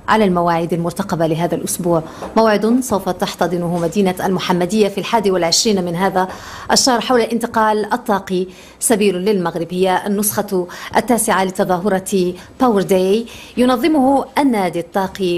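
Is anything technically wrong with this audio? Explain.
No, nothing in the signal points to a technical problem at any point in the recording.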